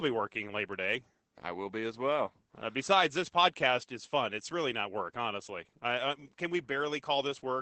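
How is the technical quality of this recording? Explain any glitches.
Muffled, hoarse and faintly robotic speech runs throughout, with nothing above about 11.9 kHz. This is Opus voice compression in its SILK linear-prediction mode, at a rate that fits about 12 kbps, coding the excitation coarsely and stripping the top band.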